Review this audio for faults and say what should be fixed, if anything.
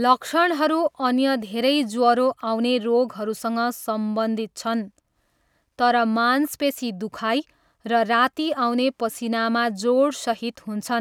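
Nothing in this speech recording needs fixing. No fault can be heard anywhere in it, so there is nothing to prevent.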